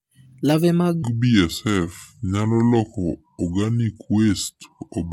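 Speech that plays normally for the first second, then from 1.03 s to the end drops into a section at the wrong speed. Playback runs at about 0.72 times the original rate, so the voice turns slow and deep, lowered by roughly five semitones, with timing and pitch shifting together at the boundary. The likely cause is that portion being resampled or clocked against the wrong rate during editing or playback.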